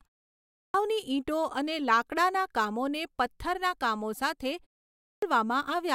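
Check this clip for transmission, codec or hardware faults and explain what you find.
The clip shows a clipped start after a pause, twice. At 0.45 s, after 0.45 s of silence, about 290 ms of speech is missing up to 0.74 s. At 4.9 s, after a 0.32 s pause, about 320 ms is lost until 5.22 s. The output device drops into sleep during silence and needs time to wake, so speech resumes abruptly, without its opening sounds. Unlike muted pauses, which only silence the background between phrases, this fault removes actual speech.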